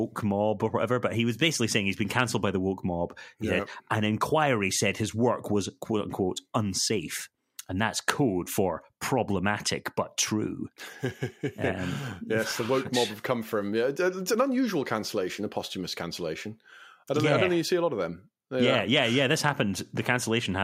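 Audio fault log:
No faults turned up anywhere in this speech clip, so there's nothing to log here.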